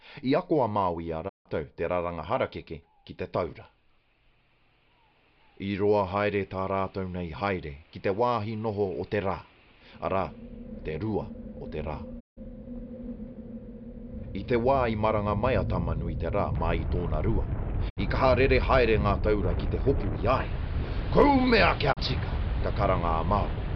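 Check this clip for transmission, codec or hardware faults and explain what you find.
Four digital broadcast dropouts occur, at 1.28–1.48 s, 12.19–12.39 s, 17.88–17.99 s and 21.92–21.99 s. The receiver mutes when frames are lost or corrupted. Each time the sound fades out over about 20 ms into silence of 160, 160, 64 and 32 ms, in steps consistent with roughly 32 ms frames. The audio then resumes with that stretch permanently missing.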